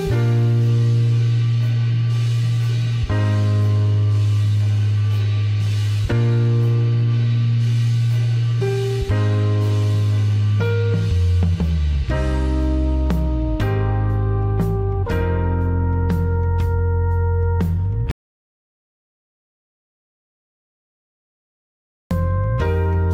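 At 18.11 s the sound cuts off into dead silence, an audio dropout to silence, and only comes back at 22.11 s. That's about 4 s gone with no room tone at all, likely the input dropping out while the recorder kept writing silence.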